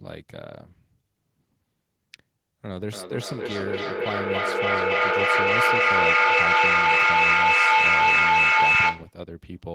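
From 2.87 s to 9.2 s the speech keeps coming back at a steady interval of roughly a third of a second, each return thinner and more ringing. Rather than dying away, the repeats pile up until they reach about 13 dB above the speech itself. This is feedback echo between two devices: two devices in the same room are on one call, one plays what the other's microphone sent, and that microphone picks it up again. Each device's echo canceller removes only its own playback, so the loop keeps circulating and building.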